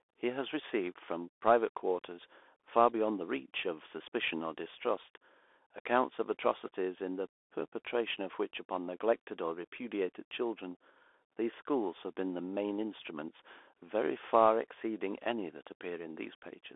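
From start to finish the speech carries the Bluetooth CVSD headset codec, the one-bit delta modulator used on narrowband headset links, whose sound fits a 64 kbps CVSD stream. The line passes only about 300 Hz to 3.5 kHz, so voices sound thin and boxed. The step size can't keep pace with loud high content, so s sounds turn scratchy and a grainy hiss sits beneath. A spectrogram shows a flat ceiling near 3.5 kHz, an empty floor below 300 Hz, and speckled noise filling the band.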